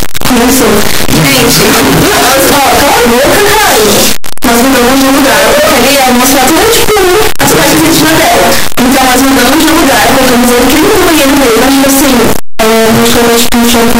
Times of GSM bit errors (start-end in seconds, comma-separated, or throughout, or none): none